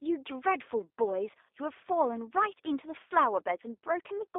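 From start to finish, the speech passes through a G.729 codec at 8 kbit/s. The telephone band removes everything above 3.7 kHz. Pulse-coded excitation makes the voice audibly rough and synthetic.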